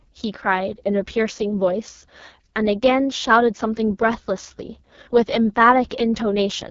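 Speech, carried through the AMR wideband (HD Voice) codec for the whole clip. The damage is heavy. The voice sounds rough and raspy throughout. That harshness points to the codec's lowest mode, around 6.6 kbit/s. At that rate the pulse-driven vocal tract model has too few bits to shape the sound cleanly. Nothing is heard above about 7.4 kHz. The top band is filled with shaped noise rather than real detail.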